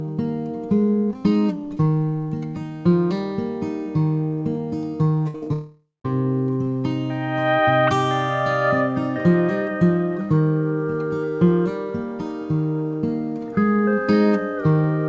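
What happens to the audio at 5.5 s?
A burst of packet loss starts at 5.28 s and runs to 5.49 s, with a second overlapping burst from 5.36 to 5.44 s. Each time about 60 ms of audio failed to reach the decoder in time, and the receiver stretched the last received sound across the hole while turning it down. The result is a held buzz or fading hiss, and when the audio resumes a short stretch has been skipped.

Short concealed packet loss follows immediately, from 5.44 to 5.49 s. About 20 ms went missing, and the receiver patched it with roughly 27 ms of continued sound before blending back into the real signal. This is heard as a brief smear or wobble, so any short sound falling there can simply vanish.

A long network dropout then begins at 5.53 s and lasts until 6.06 s. About half a second of audio is gone, likely because nothing arrived over the network for that stretch. The decoder first extends the last sound as a buzz or hiss that decays. 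The final portion, roughly 170 ms, is near silence. The audio comes back after 6.06 s without the lost material. The call codec's band limit holds throughout, with nothing above 8 kHz.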